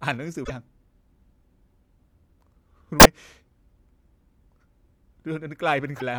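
At 0.41 s the speech breaks up briefly, lasting to 0.50 s. This is damaged data in a compressed stream. Part of the coded data is wrong, so the decoder misreads those frames and loses sync. It then hunts for the next valid frame header. The same kind of break returns from 2.99 to 3.07 s. A third, briefer one sits from 5.96 to 6.02 s.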